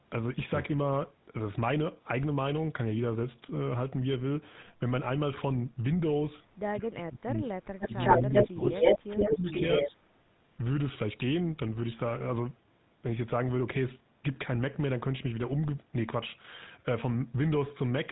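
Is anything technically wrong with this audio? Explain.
Yes. The GSM full-rate codec colours the whole clip: a buzzy, gravelly roughness and nothing above 3.9 kHz, rougher-textured than plain band-limiting.

Speech suppressed in double talk, likely from an echo canceller muting both talkers, makes the voice dip from 6.71 to 7.99 s, deeply, then 8.21 to 8.77 s, 9.27 to 9.46 s and briefly at 9.85 s, each shallower.

An echo leak, likely an uncancelled loudspeaker return, adds a fainter copy 109 ms behind the voice from 7.8 to 9.91 s. It is a distinct repeat, not reverb.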